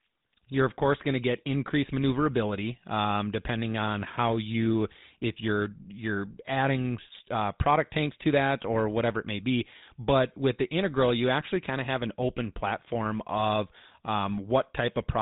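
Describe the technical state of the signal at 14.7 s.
GSM full-rate coding runs through the whole clip, including 14.7 s: pulse-driven vocal-tract modelling leaves speech buzzy and gravelly, with nothing above 3.8 kHz.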